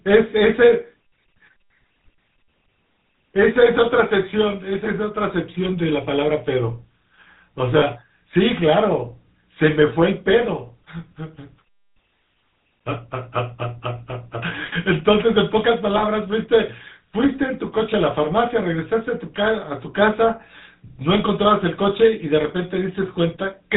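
Throughout, the speech carries the buzzy, gravelly roughness of the GSM full-rate codec, plainly audible and consistent with a 13 kbit/s stream. The codec rebuilds the voice from a vocal-tract model excited by sparse regular pulses, and it cuts off everything above 4 kHz.

Lost GSM frames occur at 7.78 to 7.83 s, a 40 ms loss, and at 15.98 to 16.02 s, a 20 ms loss. In each gap the decoder repeats the last good frame, producing a brief rough, metallic ring.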